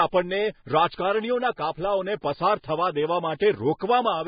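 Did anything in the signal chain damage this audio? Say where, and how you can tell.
Yes: throughout, the speech is hissy and grainy with nothing above 4.9 kHz, likely Vorbis compression at a very low bitrate in the codec stage. Grainy noise replacing the upper detail rules out a plain low-pass filter.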